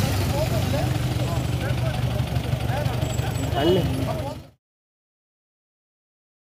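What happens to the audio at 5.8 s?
At 5.8 s the audio is intact, with no fault of any kind at that point.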